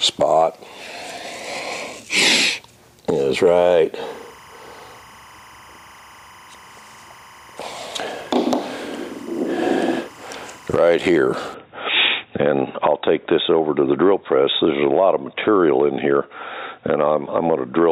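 From 4.03 s to 10.77 s, timecode bleed sits behind the sound. Linear timecode running at 25 frames per second has leaked in from a nearby line. Its square wave flips between pitches near 1 and 2 kHz. It is heard as a steady chirping warble, roughly 25 dB below the sound.

At 11.54 s the sound turns dull and boxy through to the end. Nothing remains above 3.8 kHz. There is no gap at the change, and the level stays about the same. Faint new background noise appears, roughly 40 dB down. The likely cause is an input switched to a poorer device.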